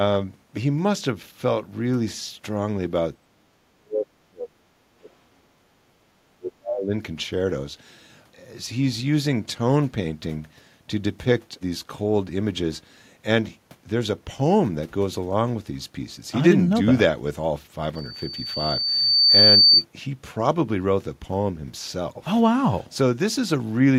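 A speech recording, marked by speech suppressed in double talk between 3.26 and 6.93 s. Across about three seconds of that span the voice sinks, thins and breaks into fragments, dropping by as much as roughly 35 dB at its deepest. The likely cause is an echo canceller that, with both ends talking at once, could not separate the near talker from loudspeaker echo and attenuated everything.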